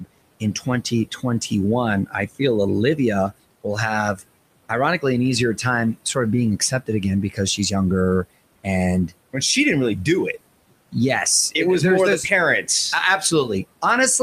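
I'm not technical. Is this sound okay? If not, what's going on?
No. There are noise suppressor artifacts throughout: a filter cuts the steady room noise hard during gaps and lets it back in under the speech, so the background pumps in and out and can warble.

The filter also causes speech cut by the noise suppressor, mistaking parts of the speech for noise and turning them down. Brief stretches at 0.40–0.67 s, 0.90–1.24 s, 2.06–2.40 s and 7.30–7.39 s, each about a tenth of a second in total, sound swallowed or faint.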